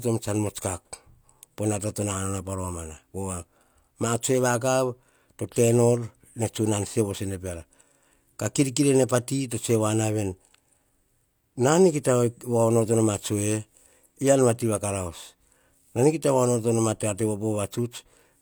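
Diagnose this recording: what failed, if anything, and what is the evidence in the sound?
Nothing failed: no stage in the chain, from capture and conversion through to playback, leaves any audible trace of a fault in this speech recording.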